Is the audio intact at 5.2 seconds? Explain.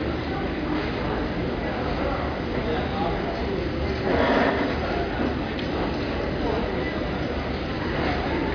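Yes, the audio is intact at 5.2 seconds, with no dropout, click, distortion or other fault at that moment.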